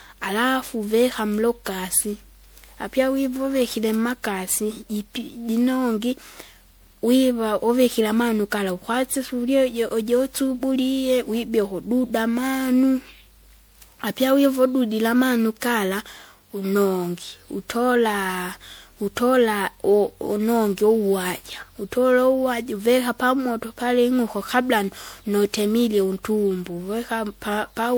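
Throughout the speech there is generation loss. It sounds swirly, hollow and smeared, with blurred consonant onsets. This is likely from repeated MP3 re-encoding, consistent with roughly seven passes at 128 kbit/s. A spectrogram shows accumulating holes and smeared bands beneath a hard ceiling near 20.9 kHz.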